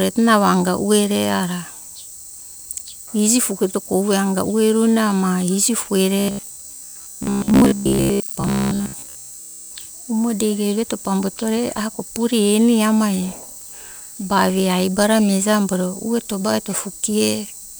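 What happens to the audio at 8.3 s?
At 8.3 s the speech has become a rigid, metallic buzz pitched near 66.8 Hz, still loosely tracking the words, from 6.19 to 9.71 s. This robotic sound from repeated short buffers is likely caused by audio arriving too seldom, so roughly 15 ms fragments repeat while most real audio is skipped.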